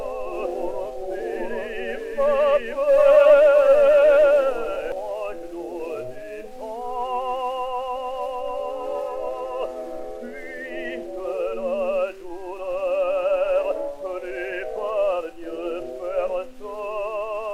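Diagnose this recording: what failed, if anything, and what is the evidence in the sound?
A doubled audio track runs from the start to 4.92 s: a full-band copy trails about 0.7 s behind at roughly equal level, without decay or room colour, then stops abruptly. The spectrogram shows every pattern repeated about 0.7 s later. The likely cause is a slower second capture path or an edit overlap.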